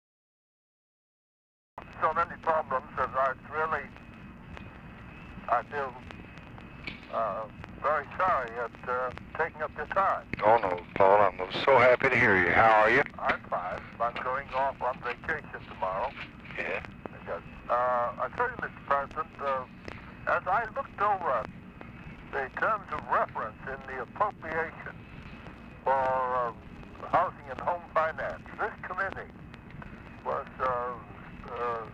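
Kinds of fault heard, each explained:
Cut-off start at 1.78 s: the file holds digital silence from 0.0 s until 1.78 s, and then the audio enters abruptly partway through a sound rather than building from its beginning. This happens when capture or streaming begins late, so the opening of the sound is lost and the material that survives is pasted straight against silence. There is no natural attack or fade-in at that point, just a sudden step from nothing to sound.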